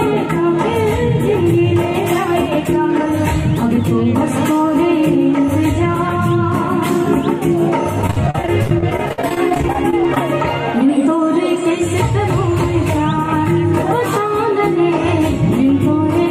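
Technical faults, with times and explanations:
8.02–10.21 s, repeated packet loss (robotic sound): holes up to 50 ms recur rapidly, each patched by stretching the previous sound, so about 22% of the span is concealed. The result is choppy chatter with pieces missing, with frozen, smeared spectrogram blocks and repeated waveform cycles.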